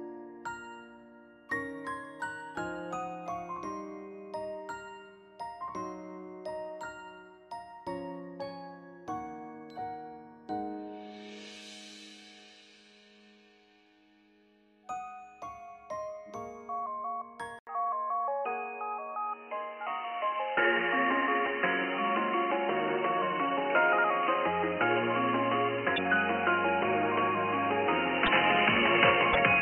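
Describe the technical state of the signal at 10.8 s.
At 10.8 s the signal is intact, with no dropout, distortion, glitch or other fault to be heard at that moment.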